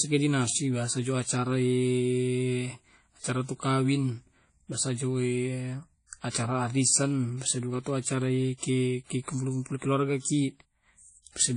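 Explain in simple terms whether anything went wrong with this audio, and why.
WMA compression is audible throughout the speech: the sound rings and smears, with a hiss that swells and fades with it, and nothing survives above about 10.1 kHz. This likely comes from a low-quality WMA encoding that discarded fine detail to save space.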